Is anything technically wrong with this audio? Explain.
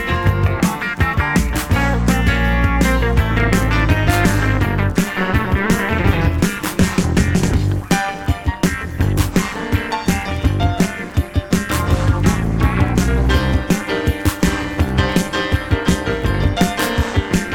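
Yes. From 3.31 s to the end, the sound takes on a metallic buzz with extra tones around each note, swelling and dipping by about 11 dB around 200 times a second. This is overlap-add ripple: the audio was rebuilt from windowed frames whose overlap doesn't sum to constant gain, so the level pulses once per frame.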